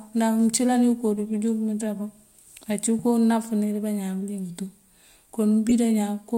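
A corrupt frame decoded at 5.69 to 5.72 s shows up as a brief glitch in the speech. Flipped bits in what sounds like a single compressed frame were played regardless, so misread gains pushed energy into the wrong frequencies, peaking around -15 dBFS.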